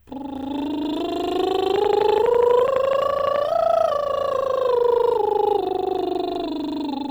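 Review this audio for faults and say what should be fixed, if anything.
A regular ticking sits over the music from 1.76 to 3.37 s, about twenty sharp clicks at 11.9 per second, peaking roughly 10 dB above the music. This train of clicks is likely interference from nearby equipment or a struggling interface. Keep cables and the interface away from noisy gear and use a stable, properly powered interface.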